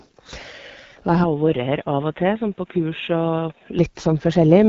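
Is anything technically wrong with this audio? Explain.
Yes, there are two problems. Throughout the clip the speech carries AMR wideband (HD Voice) codec damage: a rough, raspy, buzzy grain, with nothing above 7.5 kHz. This points to a low rate near 8.85 kbit/s, where the pulse-excited vocal tract model and the noise-filled top band cannot track the speech closely.

From 1.24 to 3.79 s the sound turns dull and boxy. The band stops at 3.8 kHz, the level drops by about 5 dB, and a faint new noise floor sits well below the speech. It changes with no gap and clears again at 3.79 s. This is likely an input switched to a poorer device.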